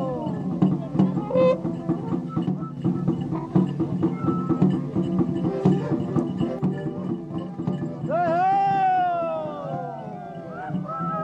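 Two abrupt level drops of about 6 dB stand out, the first from 2.46 to 2.77 s and the second from 6.59 s running to the end of the audio. Each begins as a clean step rather than a fade. The likely cause is one channel dropping out: with one side of the stereo pair lost, the mono sum keeps only half of the shared content for those stretches.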